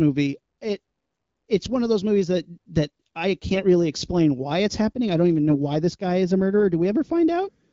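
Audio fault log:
3.54 to 3.64 s and 5.50 to 5.56 s, AMR bit errors: after "movies that that i" and after "happening i don't even", the sound turns briefly hoarse, scratchy and gargly while keeping roughly its pitch and level. Weakly protected bits in the AMR-WB frames, which sound like a clear 12.65 kbit/s stream, were flipped at roughly 7 and 5 percent across what sounds like two or three frames. The excitation pulses were misplaced and the fine pitch, gain and spectral values went wrong.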